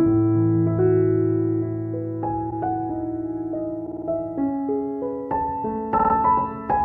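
Repeated frames stutter at 2.50 to 2.55 s, 3.85 to 4.06 s and 5.97 to 6.13 s. Each time a 52.2 ms block, which fits two compressed frames, replays one, four and then three extra times. Unlike a dropout, which removes sound, each repeat adds time to the audio.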